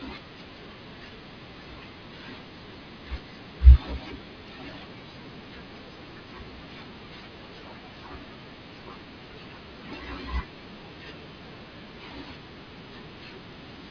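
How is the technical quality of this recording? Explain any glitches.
No technical faults can be heard.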